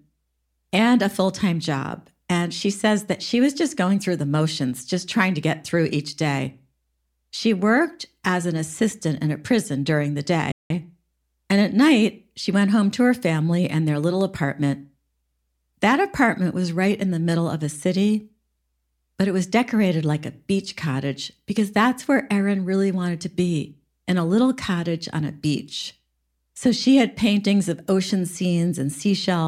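At 10.52 s, just after "a prison during the", the speech cuts out abruptly in mid-flow and the output stays silent until 10.70 s, a gap of about 183 ms. This is a playback stall. The silence is a hard dropout with no fade, long enough to break the rhythm of the phrase. The likely cause is that the player ran short of buffered data or its audio thread was briefly blocked, so nothing was written to the output until it recovered.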